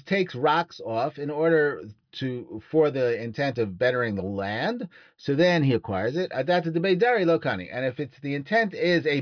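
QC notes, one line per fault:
No faults turned up anywhere in this one, so there's nothing to log for it.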